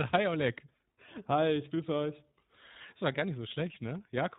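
Throughout, the speech carries iLBC codec damage: nothing above 4 kHz and a rough, synthetic edge, consistent with 20 ms frames coded independently, unlike smoother predictive narrowband codecs.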